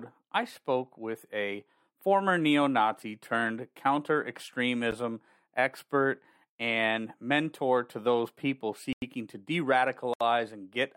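At 4.91 s the speech drops to a block of digital silence about 12 ms long, heard as a single tick. Just after "mentor to those people", from 8.93 to 9.02 s, a 93 ms block of zeros leaves an audible hole, which fits a missed 4096-sample output buffer. A third dropout, from 10.14 to 10.21 s, lasts 70 ms. Each cuts abruptly with no fade.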